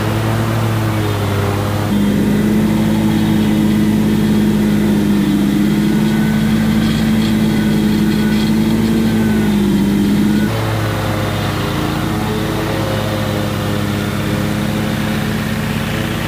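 Throughout the clip, a grainy, gritty distortion rides on the sound and follows it, sitting around 20 dB below the signal. The likely cause is low bit depth without dither: rounding to about 5 bits leaves error that tracks the waveform instead of masking it.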